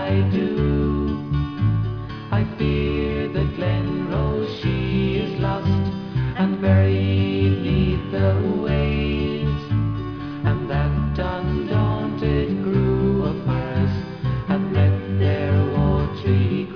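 From start to finish the clip carries aliasing: the sound was brought down to a much lower sample rate, which points to roughly 11 kHz, without first removing content above half that rate. Everything above about 5.5 kHz folds back into the band as false, unrelated tones, sitting around 30 dB under the main signal. The highs sound gritty and metallic. On a spectrogram, energy runs solidly up to a hard edge near 5.5 kHz, with mirrored streaks below it.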